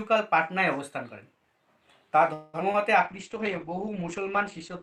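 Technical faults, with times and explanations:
2.33–2.62 s, long network dropout: about 0.27 s is filled with a fading continuation of the preceding sound, and roughly 60 ms is lost outright, likely because arrivals stopped and delay jumped by around 150 ms.
2.72–2.79 s, short concealed packet loss: about 20 ms went missing and the receiver patched the gap by extending the previous sound, giving a brief smear before blending back.
3.06–4.83 s, call bitrate drop: the sound turns coarse and muffled to the end, with highs cut above about 8 kHz, which fits the encoder falling to roughly 10 kbps.
3.35–4.33 s, jitter buffer slow-down: repeated pitch periods stretch this stretch by 61 ms, so the audio runs at 94% speed with unchanged pitch and drawn-out sounds.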